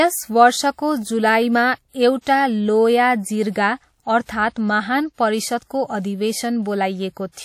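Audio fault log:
throughout: WMA compression, likely. The speech carries a washy, ringing quality with hiss that swells and fades with the signal. Nothing sounds above 17.2 kHz. The damage is plainly audible, which fits a low bitrate near 48 kbps.
2.21–2.27 s: pre-echo, just after "वर्षको जुलाईमा". A short hiss smears ahead of a sharp attack for about 58 ms. The codec spread noise meant for the loud onset across its whole block, so the quiet moment before it fills too.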